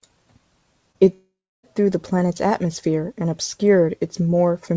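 A short concealed packet loss falls between 0.92 and 1.03 s. About 20 ms of the stream arrived too late to decode, so the receiver bridged the gap for roughly 24 ms by carrying the preceding sound forward, then crossfaded back into the real signal. A few milliseconds of genuine audio were swallowed in that blend. It comes across as a quick smear or wobble in the speech rather than a clean gap.

From 1.14 to 1.65 s there is about half a second of missing audio, most likely a long network dropout. The receiver first extends the last sound as a fading buzz or hiss, then leaves roughly 0.31 s of silence before the speech resumes further on, with the lost half second simply skipped. Throughout, the band stops at 8 kHz, which fits a wideband G.722 call codec running around 64 kbps.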